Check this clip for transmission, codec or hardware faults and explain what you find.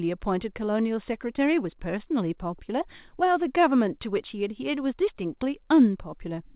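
Nothing faulty is audible in the speech, which comes through a call path band-limited to nothing above 4 kHz, consistent with narrowband G.711 A-law at 64 kbps.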